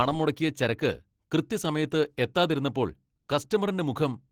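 A speech clip with Opus voice compression throughout its length. The damage is plainly audible: coarse coding of the excitation in the SILK layer leaves the voice hoarse and slightly robotic, while a CELT layer still reaches about 20.2 kHz, which fits hybrid mode near 16 kbps.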